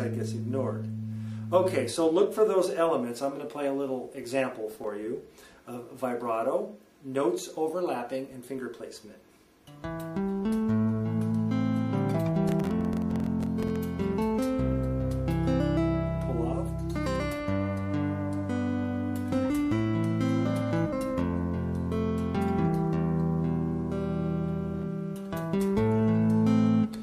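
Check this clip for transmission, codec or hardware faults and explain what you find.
Two bursts of processor overload crackle are present, at 4.71 to 4.87 s and again, much longer, at 12.49 to 13.77 s. In both, the processor fell behind and repeatedly missed the deadline for very short audio buffers, which sounds like blocks of about a millisecond and a half. Each missed block came out as silence with abrupt edges. A handful of these gaps in the first burst and dozens in the second produce a gritty, tearing crackle over the sound that stops once the load clears.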